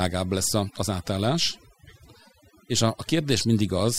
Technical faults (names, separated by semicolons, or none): overdone noise removal